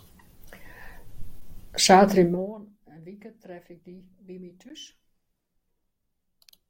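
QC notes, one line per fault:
1.41 s and 4.69 s, underrun with held sample: the output buffer emptied for about 12 ms, which fits a 512-sample buffer. The converter froze on its last value, briefly flattening the sound, while roughly 10 ms of live audio was skipped.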